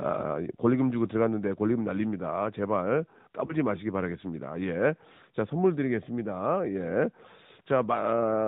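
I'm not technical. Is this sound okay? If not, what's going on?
No. The whole recording has been squeezed through the AMR narrowband mobile codec, the system older mobile networks use to shrink speech. It cuts everything above 4 kHz, so the voice sounds muffled and boxy. Here the squeezing is strong enough to hear plainly: the voice takes on a buzzy, synthetic edge. Unlike ordinary muffling from a poor microphone, that artificial buzz tells you a phone codec is rebuilding the speech rather than simply dulling it.

There is also one lost AMR speech frame, from about 3.46 to 3.53 s. A single 20 ms chunk of the call failed to arrive intact, so the phone guessed the missing bit by repeating what came just before at lower volume. You hear a brief dip or wobble, and the voice sounds a little rough for a moment as it recovers. A plain dropout would be a hard silence or click. This is a brief, smeared stumble instead.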